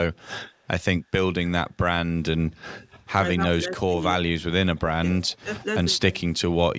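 Speech clip with two call-path problems. There's a faint delayed copy of the talker at 0.49–0.68 s and again, clearly louder, at 5.13–5.38 s, trailing by about 270 ms, likely an echo leak from a loudspeaker the echo canceller didn't fully cancel. Then the talker's level drops sharply, in bites from a few tens of milliseconds up to about 300 ms, at 3.57–4.02, 4.37–4.43, 4.64–4.74, 4.98–5.03 and 5.42–5.49 s, likely speech suppressed in double talk as the canceller turns this talker down along with the loudspeaker echo while they overlap.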